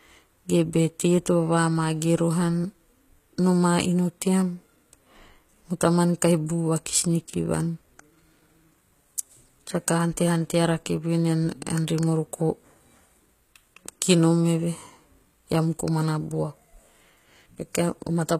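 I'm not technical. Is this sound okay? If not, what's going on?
No. Throughout, the s sounds come out gritty and lisping, a sign of heavy HE-AAC compression likely rebuilding the treble from copied lower frequencies.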